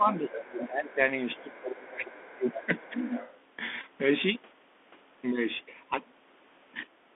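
Bluetooth CVSD headset codec, throughout: the audio is held to a narrow band of about 250 Hz to 3.5 kHz. The one-bit delta coding at 64 kbps plainly shows, with scratchy sibilants, distortion where loud high energy outpaces the adapting step size, and a granular hiss beneath the speech.

Speech suppressed in double talk, 0.0 to 1.0 s: the talker drops by about 20 dB for roughly a second. Likely the echo canceller could not tell the near talker from loudspeaker echo while both sides spoke, and it turned everything down.

Other side's voice leaking through, 0.13 to 0.65 s: a second voice sits about 15 dB under the talker. It is likely far-end audio from the loudspeaker that the echo canceller left in the microphone signal.

Speech suppressed in double talk again, 1.35 to 3.15 s: the talker dips by about 20 dB over roughly one and a half seconds in total, likely the same double-talk suppression.

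Other side's voice leaking through, 1.37 to 1.59 s and 2.13 to 3.36 s: the far voice returns about 20 dB down, briefly and then for a longer stretch. It overlaps the suppression, and both likely come from the same double talk.

Bluetooth headset packet repeated, 3.81 to 3.84 s: a short buzzy burst near 267 Hz. About 18.8 ms of audio went missing, which fits roughly five lost packets. The chip kept re-decoding the last packet every 3.75 ms until good data resumed.

Speech suppressed in double talk, 7.03 to 7.15 s: a brief, deep cut of about 35 dB lasting about a tenth of a second. It is likely a final burst of double-talk suppression at the end.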